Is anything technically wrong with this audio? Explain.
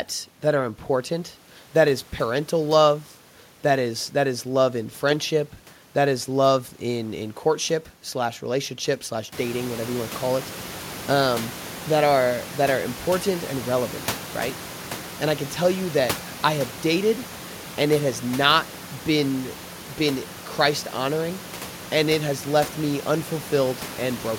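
No, nothing is technically wrong.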